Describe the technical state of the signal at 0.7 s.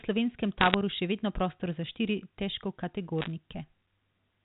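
Bit errors on a digital phone line run from 0.61 to 0.74 s. Flipped bits corrupt single samples, so the speech carries sharp ticks and crackle at a rate of roughly one bit in 150.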